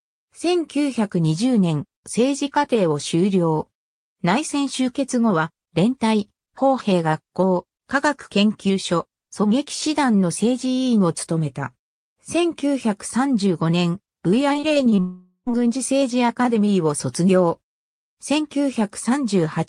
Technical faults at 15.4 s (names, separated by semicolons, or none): long network dropout